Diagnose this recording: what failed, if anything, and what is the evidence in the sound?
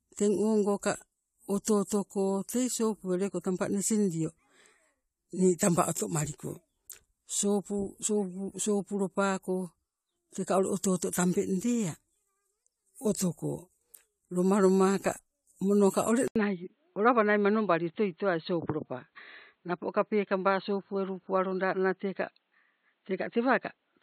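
At 16.28 s, after an 80 ms gap, the speech turns boxy, with nothing above 4.3 kHz through to the end, at roughly the same level and over a new faint noise floor. This is likely an input switched to a poorer device at the driver stage. The silent gap and changed noise mark it apart from a codec narrowing its bandwidth.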